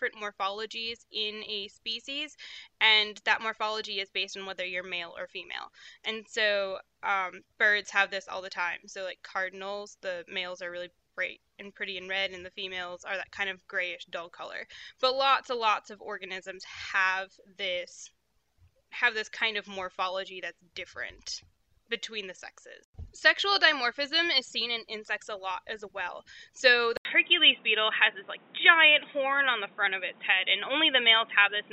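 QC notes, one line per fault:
26.97–31.72 s, input switched to a poorer device: after a gap of about 80 ms the sound turns dull and boxy, with nothing above 3.8 kHz, a level shift of roughly 5 dB and a new noise floor around 30 dB under the signal. The likely cause is the input moving to a narrower-band microphone or headset profile. On a spectrogram, the upper band cuts off abruptly after a short blank column. The waveform shows the gap and a changed envelope.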